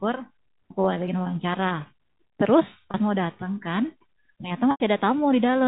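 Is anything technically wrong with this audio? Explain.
Yes, there are two dropouts of the same kind, both packet loss with pitch repetition, at 2.91 s and 4.71 s, all of it carried over G.711 telephone coding, which stops the band at 4 kHz. At each point, speech data failed to arrive, and the receiver bridged the hole by repeating the last pitch period it held, fading that copy out over roughly 50 ms. The first gap lasts 30 ms, which fits a single lost packet, and sounds like a brief held, buzzy tone. The second lasts 90 ms, which fits about three lost packets. Its buzz stretches longer and fades toward silence before the speech cross-fades back in.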